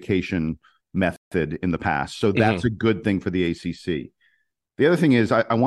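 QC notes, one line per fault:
1.16–1.32 s, rebuffering stall: the speech drops to silence for about 153 ms, then resumes on "in the past" exactly where it stopped. Playback ran dry and waited for data.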